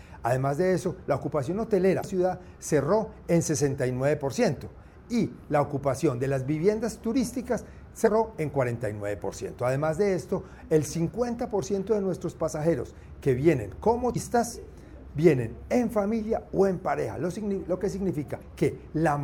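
Damaged data in a compressed stream corrupts four stretches, so the decoder misreads those frames and loses sync until it finds the next frame header. Each is heard as a brief glitch: 2.00–2.04 s, 8.06–8.08 s, 14.12–14.17 s and 18.38–18.42 s.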